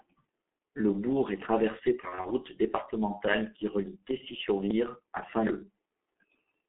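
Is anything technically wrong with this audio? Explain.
Yes. G.723.1 codec damage runs through the whole speech clip: the line is limited to 250 Hz to 3.5 kHz and coded at 6.3 kbit/s in 30 ms frames. The codec's slowly updated voice model leaves the speech heavily muffled and hoarse, with smeared consonants.

VoIP packet loss concealed by the speech codec occurs from 2.00 to 2.27 s, between "bourg est traversé" and "départementale qui relie". About 120 ms of audio is missing, scattered over 240 ms with gaps no longer than 30 ms, which fits isolated single frames dropping out. The decoder fills each gap by extrapolating its last pitch and filter at falling gain, so the speech briefly turns weak and stays distorted until the decoder recovers.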